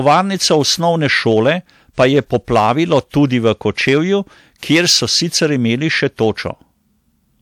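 Hard clipping runs throughout the speech: a stage overdriven by about 7 dB flattens the loudest peaks, roughly one percent of samples, adding high harmonics heard as crackle.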